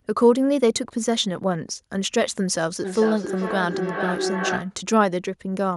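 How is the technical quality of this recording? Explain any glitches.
The recording has one clear glitch, a feedback howl from 2.84 to 4.77 s. A microphone was picking up a nearby loudspeaker carrying the same call, and the loop gained level on each pass. A tone around 400 Hz builds, with the loop repeating roughly every 400 ms, peaking about 5 dB below the speech.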